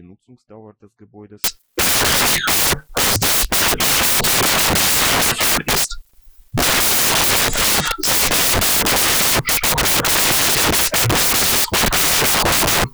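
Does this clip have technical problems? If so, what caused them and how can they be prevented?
Yes. From 1.44 s to the end, the audio turns into loud, harsh broadband noise: samples built from the wrong bytes. The reader misassembles each sample's bytes, so rapidly changing low-order bits dominate. Prevent it by enforcing correct byte order and frame alignment when decoding.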